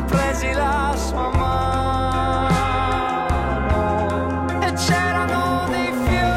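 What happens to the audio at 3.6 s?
Nothing goes wrong at 3.6 s; the audio plays through that moment intact, with no dropout, click or other fault.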